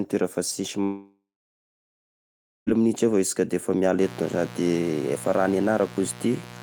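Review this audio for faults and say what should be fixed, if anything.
Right after "fa sisy", from 0.83 to 2.70 s, the speech cuts out, most likely a long network dropout. The receiver briefly continues the last sound as a fading hiss, then holds silence for about 1.5 s. The waveform flattens to a near-empty band, and the spectrogram shows a smeared tail that fades to blank. About 1.8 s of speech is simply gone when the audio resumes. Prevention: use a steadier network path with a larger jitter buffer and packet redundancy.

From 4.01 s to the end, a mains buzz sits under the speech, a steady raspy tone about 15 dB below it. On a spectrogram it appears as evenly spaced horizontal lines at 60 Hz and its harmonics, reaching into the kilohertz range. The waveform shows a fine periodic ripple through the pauses. Prevention: remove dimmers from the audio circuit, fix grounding and use shielded, balanced cables.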